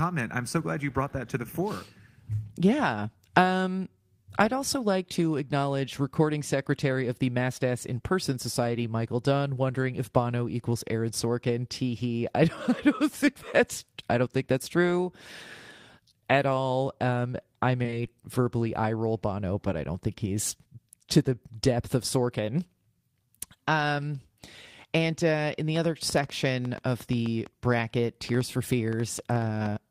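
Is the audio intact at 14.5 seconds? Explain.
Yes, at 14.5 seconds the speech plays through cleanly, with no dropout, click, distortion or other fault.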